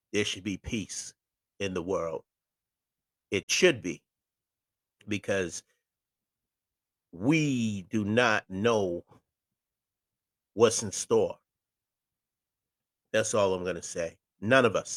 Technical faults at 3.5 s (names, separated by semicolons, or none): digital broadcast dropout